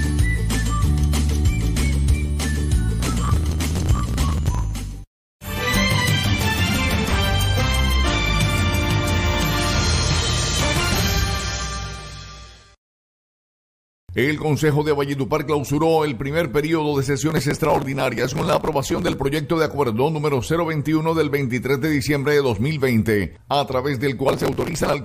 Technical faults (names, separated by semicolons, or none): processor overload crackle